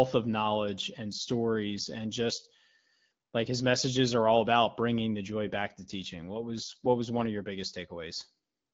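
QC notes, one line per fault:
5.30–7.28 s, AMR rate drop: right after "all about bringing the" the speech turns rougher and more synthetic, then clears up again by "of your". The bandwidth doesn't narrow and nothing drops out. The network has the codec spend fewer bits on the speech itself and more on error protection. The sound fits the HD Voice AMR-WB stream stepping down from 12.65 to 8.85 kbit/s, with the coarser coding heard as that rasp.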